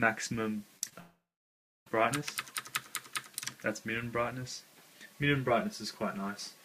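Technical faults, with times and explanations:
0.77–0.93 s, repeated packet loss (robotic sound): the audio turns choppy, with four brief holes of up to 27 ms each. Each hole is papered over by stretching the preceding sound, so almost half of this short span is synthetic fill rather than real signal.
1.00–1.87 s, long network dropout: the sound smears into a fading buzz, then drops to roughly 0.66 s of silence before resuming with a piece missing. The likely cause is a network outage of about 0.87 s, with the receiver extending the last sound until it gave up.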